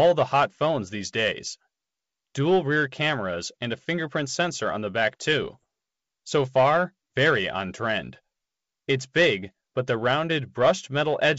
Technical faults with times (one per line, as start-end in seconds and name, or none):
5.42-5.65 bit errors on an ADPCM link